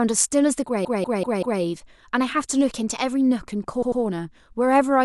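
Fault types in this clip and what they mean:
Repeated frames: the speech stutters, a 192 ms slice playing four extra times and a 96 ms slice two extra times, because compressed frames were duplicated.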